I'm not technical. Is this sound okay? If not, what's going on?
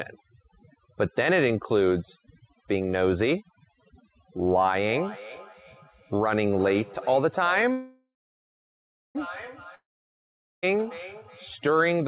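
No. The speech has four problems.

Overdone noise removal runs through the whole clip. A noise-reduction step set too aggressively has stripped out the background along with quieter parts of the speech, leaving the background broken up into twinkling specks.

A feedback echo between two devices runs from 4.88 s to 11.62 s. A second device on the same call in the same room replays the sound, and the first device's microphone picks it up and sends it again. Each phrase returns roughly every 0.4 seconds, quieter and more ringing each time.

A call audio freeze occurs from 7.72 s to 9.17 s. The sound smears into a fading buzz and then about a second of silence before resuming where it stopped. This was likely caused by delayed network packets, so nothing is lost but a pause is inserted.

A long network dropout follows from 9.75 s to 10.72 s. The sound again fades into silence, but when it returns, close to 0.9 seconds of speech has been skipped entirely and cannot be recovered.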